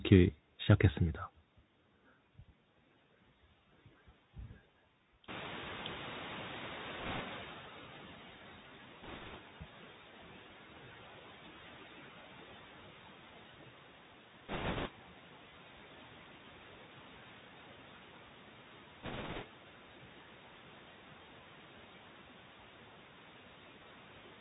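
Speech carried over a Bluetooth CVSD headset codec for its whole length, with plainly audible damage: nothing above 4 kHz survives, s sounds come out scratchy, loud high sounds smear as the one-bit delta steps fail to keep up, and a fine granular hiss sits under the speech, all consistent with a 64 kbit/s CVSD link rather than a wideband codec. From 5.28 to 8.28 s the noise suppressor is catching up: the room noise jumps by about 18 dB near 5.5 s and at first passes through with less reduction, then fades by about 12 dB over roughly 3 s as the noise estimate adapts. That gradual sinking, rather than an instant gate or pumping with the speech, marks it as a lagging estimate. Bit errors on the Bluetooth voice link add bursts of rushing crackle at 7.00 to 7.21 s, 9.03 to 9.38 s, 14.49 to 14.90 s and 19.03 to 19.44 s, at error rates from around one bit in thirty to one in ten, harshest in the 14.49 s burst. 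Because every CVSD bit carries the same small weight and errors decay, these show up as hissy roughness rather than the sharp clicks or dropouts of lost packets.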